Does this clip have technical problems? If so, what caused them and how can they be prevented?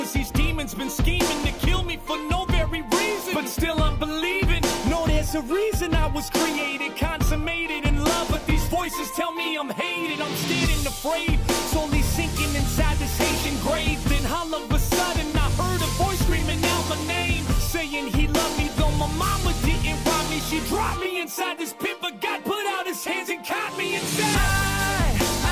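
No, no technical problems can be heard here.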